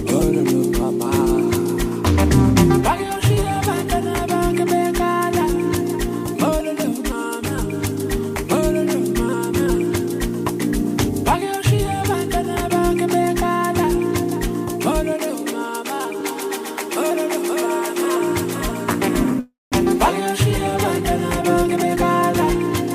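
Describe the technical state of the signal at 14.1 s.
At 14.1 s the signal runs cleanly, with no dropout, clipping, glitch or other fault audible at that point.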